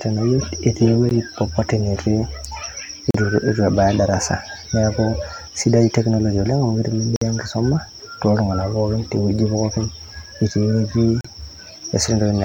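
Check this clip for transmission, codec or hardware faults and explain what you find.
The speech has four hard-edged silent holes, each a gap between stream segments. The first is at 1.09 s (16 ms), then 3.11–3.15 s (38 ms), 7.16–7.22 s (53 ms) and 11.21–11.25 s (37 ms). Misaligned timestamps at 2 s segment boundaries leave gaps the player fills with silence. Unlike a dropout, the sound resumes exactly where it stopped, with nothing missing.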